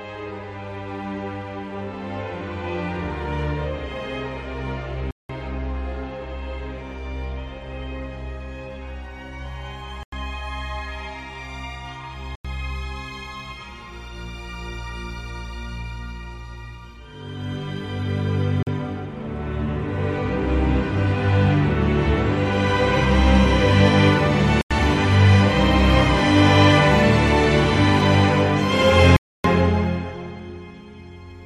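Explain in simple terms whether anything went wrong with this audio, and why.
The sound drops out to dead silence six times, at 5.11, 10.03, 12.35, 18.63, 24.61 and 29.16 s. Each is a block of digital silence, 40 to 280 ms long, where zeros filled the gap.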